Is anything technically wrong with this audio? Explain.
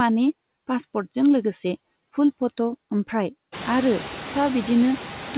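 Yes. Noise suppressor artifacts throughout: the suppressor cuts bands it treats as steady noise by about 16 dB, so the background pumps, dipping between phrases and rising under speech. This is more noticeable after the room noise swells at around three and a half seconds, in audio that stops at 4 kHz like a narrowband call codec.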